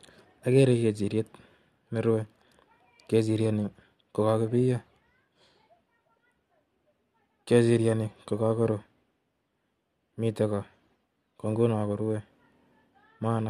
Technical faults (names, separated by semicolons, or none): none